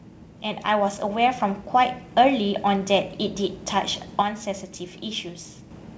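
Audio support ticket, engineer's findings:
Automatic gain rising, 0.43 to 2.96 s: voice and background noise swell together by about 6 dB over roughly 2.5 s. The AGC judged the input too quiet and ramped its gain up. The slow, smooth rise separates it from a stepped gain change.

Bit errors on an ADPCM link, 2.62 s: short pop followed by a rough, ringing burst with a brief level wobble, at a low error rate. Flipped bits upset the decoder's step size and predictor, so the damage rings on briefly rather than being one clean click or a gap.

Sudden gain jump, 4.22 to 5.71 s: whole signal, noise floor included, drops about 6 dB in one step, with no ramp. Likely a digital gain setting applied sample to sample. The instant step separates it from AGC action, which glides.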